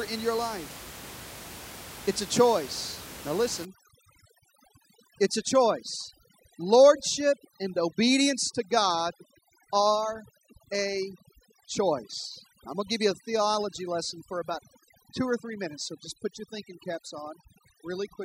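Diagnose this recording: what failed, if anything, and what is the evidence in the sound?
Overdone noise removal in the call-processing stage is the failure: from 3.65 s to the end of the speech, the suppressor is set far too aggressively. It treats any frequency band near its noise estimate as noise and cuts it to nothing, so the room noise, sitting about 16 dB below the voice, collapses into near silence dotted with twinkling specks. Quiet voice components fall under the same threshold and are removed.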